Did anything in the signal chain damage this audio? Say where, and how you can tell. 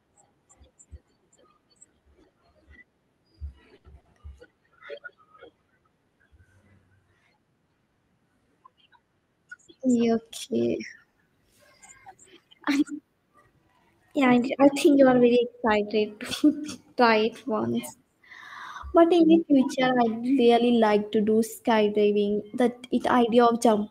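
Yes. The damage sits at the network and jitter-buffer stage. There are three short stalls from late packets, at 3.77 to 3.86 s, 4.00 to 4.07 s and 11.10 to 11.18 s. Each holds a sound unnaturally long, for 70, 50 and 60 ms, and nothing is lost. The buffer ran dry, and the receiver stretched the last sound until the packet came.

A jitter buffer speed-up follows from 14.31 to 15.11 s. The speech runs at 105% speed with its pitch unchanged, so it sounds slightly hurried. The buffer had overfilled. The receiver trimmed repeated pitch-period slices, roughly 50 ms in total, to bring the delay back down.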